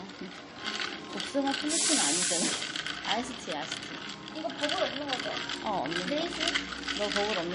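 Throughout the recording, the sound is watery and swirly, with dull treble and metallic chirps. This is likely heavy MP3 compression, fitting a bitrate near 40 kbps.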